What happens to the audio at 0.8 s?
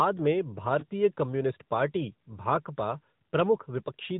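Lost AMR speech frames hit from 0.80 to 0.86 s, just before "कम्युनिस्ट पार्टी". About 20 ms of data failed its checksum, which points to a single dropped frame. The decoder filled the gap by reusing its last pitch and vocal-tract settings at lowered gain, heard as a brief dip or warble before the sound returns weak or rough for a moment.

This happens over the AMR narrowband mobile codec, present throughout at 10.2 kbps. Its vocal-tract model, driven by sparse pulses, passes nothing above 4 kHz, so the sound around the dropout is muffled and the codec damage is plainly audible.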